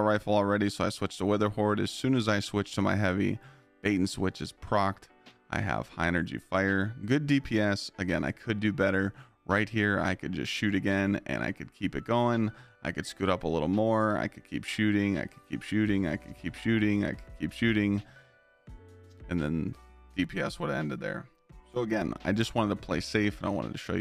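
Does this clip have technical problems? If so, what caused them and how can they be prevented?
Yes. Channel delay (comb filtering) appears from 20.24 to 22.02 s: one channel arrives roughly 5 ms late, and summing to mono cancels shared content at evenly spaced frequencies starting near 100 Hz, giving a hollow, phasey tone. Preventing it means keeping both channels time-aligned before any mono fold-down.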